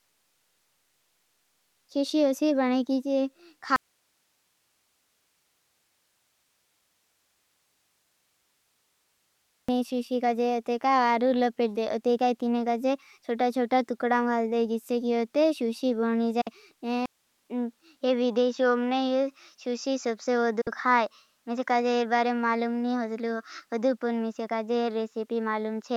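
From 3.76 to 9.69 s, after "बनै की की", the speech vanishes into faint hiss far below its normal level until "शुशी काजे". This is an audio dropout to a faint residue, likely a live path that lost its source, and it differs from a pause because the hiss continues.

At 16.41 to 16.47 s, a digital broadcast dropout fades out within 8 ms into 48 ms of true silence, then returns.

From 17.06 s to the end, after a 200 ms silence, the input switched to a poorer device, likely a different microphone. Nothing is heard above 7.4 kHz, and a new noise floor sits well below the speech. The level barely changes, so the giveaway is the sudden dullness.

A second digital broadcast dropout, identical in shape, falls at 20.61 to 20.67 s on the new input.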